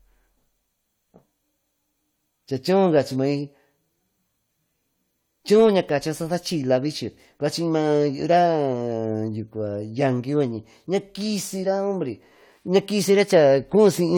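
Nothing goes wrong anywhere in this speech recording, so there's no technical fault to point to at any moment.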